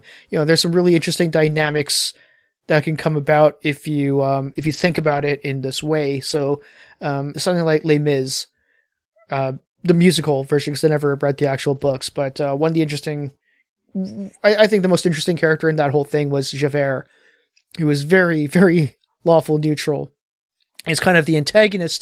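Speech with several stretches of lost packet rebuilt from error correction, at 1.45 to 1.79 s, 4.45 to 4.51 s, 4.57 to 5.27 s, 6.29 to 6.39 s and 11.75 to 12.01 s. No gaps are heard. The decoder played low-bitrate copies instead, so those passages turn rough and noisy. One short concealed packet loss sits at 4.53 to 4.57 s. About 20 ms never arrived, and the receiver extended the preceding sound to fill it, leaving a brief smear.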